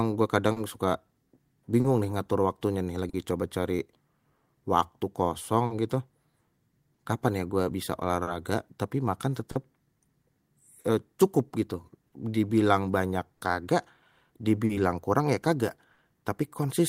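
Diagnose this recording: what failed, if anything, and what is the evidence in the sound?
Clock drift between sender and receiver is present throughout. The sender's clock runs slow, roughly 3 percent behind the receiver. The jitter buffer therefore drains steadily. The receiver keeps stretching or repeating short pieces to cover the shortfall. The sound carries small timing hiccups at uneven intervals across the whole speech clip. This is a failure at the network and buffer stage, not in the source.

Scattered short gaps also appear between 0.52 s and 15.99 s. There are around fifteen of them. Each is a lost or late packet, patched by extending the preceding sound. The longest lasts roughly 40 ms. Together they conceal about half a second, around 3 percent of that span. Nothing drops to silence. Instead you hear brief smears, ticks and stutters dotted through the speech. This is packet loss on the network path, hidden by concealment.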